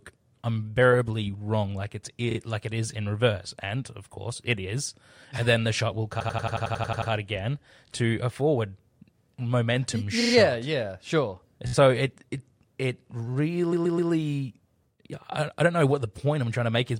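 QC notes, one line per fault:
2.30 to 14.10 s, repeated frames: five stutters, at 2.30 to 2.37 s, 6.19 to 7.10 s, 10.20 to 10.33 s, 11.67 to 11.73 s and 13.72 to 14.10 s, where the decoder replays the same stretch of compressed audio. Blocks of 25.3, 81.3, 42.7, 16.0 and 128.0 ms play 2, 10, 3, 4 and 3 extra times. The 6.19 s run alone adds 0.91 s.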